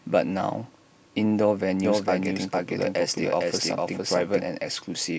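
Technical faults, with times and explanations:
1.84 to 4.46 s, doubled audio track: the speech is heard twice, a full-band copy trailing about half a second behind at roughly equal loudness, with no decay, starting and stopping abruptly. Likely a second, slower capture path or an edit holding two misaligned copies.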